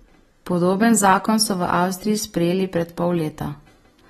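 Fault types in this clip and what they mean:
AAC compression: The speech has nothing above 13.8 kHz, so the top end sounds dull. Codec damage is plainly audible through the whole clip. Sibilants turn fizzy, and sustained sounds warble and smear. The cause is likely AAC-LC coding at a low bitrate. This coder quantises each frame's spectrum against a model of hearing. Short of bits, it drops the highest band and coarsens the rest. The sound points to about 32 kbps.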